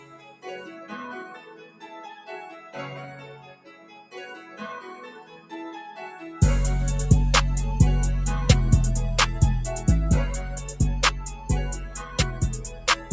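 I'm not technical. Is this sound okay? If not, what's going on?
No. A noise suppressor built for speech was left running on this audio, so it is a noise suppressor applied to music or sounds. It mistakes steady, held parts for background noise and keeps turning them down, making the level swing noticeably.

There are seven clear moments of sound cut by the noise suppressor: 0 to 0.45 s, 1.39 to 1.86 s, 3.4 to 4.14 s, 5.23 to 5.52 s, 11.35 to 11.5 s, 11.84 to 12.18 s, and 12.34 s to the end. Each time, the sound dips.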